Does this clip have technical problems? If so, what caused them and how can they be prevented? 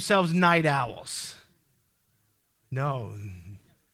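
No, there are no technical problems in this clip.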